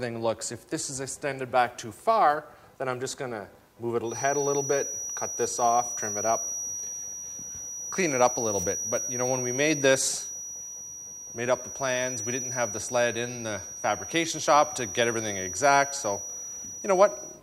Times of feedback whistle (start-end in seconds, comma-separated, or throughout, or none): 4.02-17.42